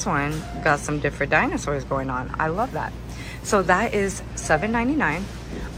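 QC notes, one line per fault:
No faults heard.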